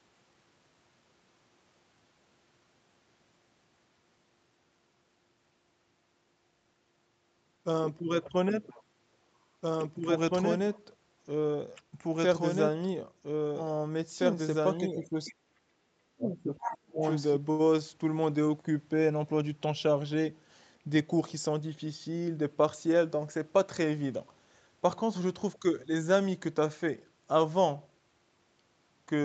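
From 9.63 s to 17.37 s the speech is heard twice: a second copy, about as loud as the first and trailing it by roughly two seconds, runs alongside without any reverberant tail and starts and stops abruptly. This doubled audio track is likely caused by the signal being captured again along a slower path.

Between 14.9 s and 17.03 s the speech drops away for around two seconds in total, at its deepest falling almost to silence. This is likely speech suppressed in double talk: with both sides talking at once, the echo canceller could not separate the talker from the loudspeaker echo and turned both down.

Brief scraps of the other side's voice leaking through appear at 15.25 s, 16.66 s and 17.07 s, each under a fifth of a second. The first sits well below the speech, the second is more noticeable, and the third is faint. They are likely loudspeaker playback that the echo canceller failed to remove from the microphone. 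Throughout, the Opus call path limits the sound to 8 kHz, which is normal for this link.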